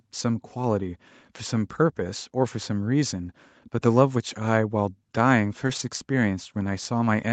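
Around 5.67 to 5.81 s there's a lost packet rebuilt from error correction: about 80 ms of speech, which fits four 20 ms packets, came back from the low-bitrate copies Opus tucks into the following packets. So no gap, but that stretch sounds rougher and noisier than the surrounding audio.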